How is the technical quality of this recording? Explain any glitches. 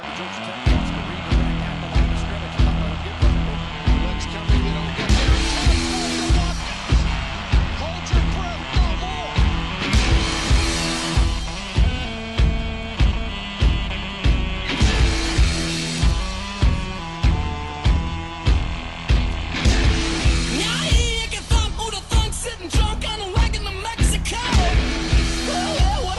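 The quality is compromised by a block size mismatch (truncated) running throughout. Block ends are discarded, causing a 43.1 Hz buzz fitting 1024-sample blocks. Timbre and pace stay unchanged.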